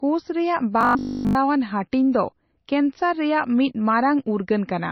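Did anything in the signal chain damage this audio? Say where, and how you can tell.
Yes. At the codec stage, the whole clip was likely squeezed through MP3 compression at a low bitrate, around 26 kbps. The heavy damage leaves the speech watery and swirly, with sibilants turning chirpy and consonant attacks smeared.

In the driver or buffer stage, from 0.81 to 1.35 s, the speech collapses into a rigid 50 Hz buzz. This is robotic sound from repeated short buffers, likely one 20 ms block replayed throughout that stretch while fresh audio was skipped. The loop imposes its own fixed, metallic pitch.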